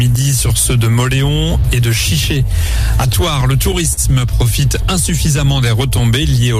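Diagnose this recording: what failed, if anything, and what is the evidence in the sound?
The network side is where it fails: you get repeated stalls (stutter) between 3.07 and 3.99 s. Five times the flow hangs briefly, with the receiver holding the last sound to fill about 78 ms in total, the longest hold around 42 ms. Nothing is actually lost. The jitter buffer kept draining because packets arrived late or too slowly, so roughly 8% of that stretch is concealment, which is what gives the dragging, hiccuping feel.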